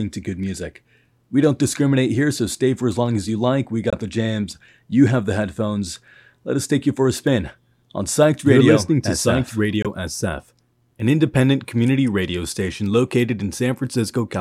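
From 0.43 s to 14.10 s, a digital link is being read by a device running on its own clock rather than locked to the sender, with the two clocks apart by roughly 30 parts per million. Each time they slip past each other, a single sample is dropped or repeated. The result is word clock ticks: sharp clicks of uneven strength through the speech at a steady rate of about one every 0.7 s, some twenty in all.

Twice, at 3.90 to 3.95 s and again at 9.82 to 9.87 s, the output falls silent for about 23 ms. This matches a single lost packet, likely a Bluetooth dropout in which the audio did not arrive in time and was discarded. Each gap is a short hole in the speech, entered and left either abruptly or with a fade of a few milliseconds. When the speech resumes, it has moved on as if it had kept playing, so the missing stretch is skipped rather than delayed.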